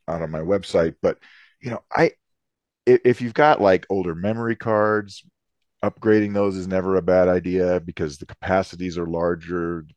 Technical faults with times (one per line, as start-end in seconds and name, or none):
0.00-2.00 adaptive stream starting at a low bitrate